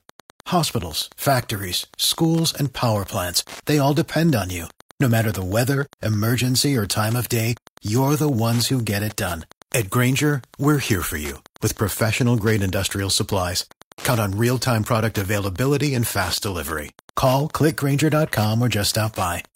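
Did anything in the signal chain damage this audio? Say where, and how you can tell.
Yes. There's Wi-Fi interference in the analogue wiring. A steady tick runs through the whole speech clip at a 102.4 ms spacing, roughly 25 dB under the signal. That's a nearby radio's beacon getting picked up and rectified by the circuit before conversion.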